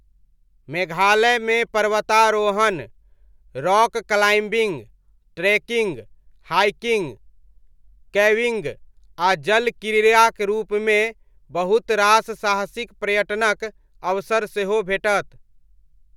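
Nothing in this bit of speech stands out as a technical fault, so there's nothing to point to along the way.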